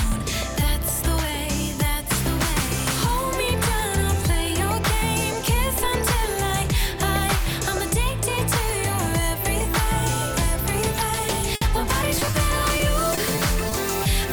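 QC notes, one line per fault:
11.55–11.63 s, burst of packet loss: about 60 ms went missing and was bridged by a held, fading copy of the preceding sound. On a spectrogram, frozen decaying bands end abruptly.
12.19, 12.25, 12.31 s, short concealed packet loss: three brief smears where about 20 ms each was rebuilt from the prior sound. The waveform shows small seams and the spectrogram short blurred slices.
12.77–14.07 s, repeated packet loss (robotic sound): five holes of up to 20 ms each, about 8% of the stretch, were patched in turn, giving a choppy texture with pieces missing. The spectrogram shows recurring smeared vertical seams.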